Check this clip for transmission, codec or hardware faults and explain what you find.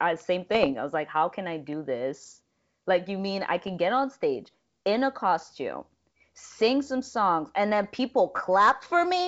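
Three short bursts of bit errors on an ADPCM link affect this speech. They come at 0.55 to 0.73 s, 3.56 to 3.77 s and 8.35 to 8.40 s as pops, rough crackle and brief level jumps. A few tenths of a percent of flipped bits knock the decoder's step size and predictor off track, so each error keeps ringing for some milliseconds. The underlying wideband coding sounds like full-rate G.722.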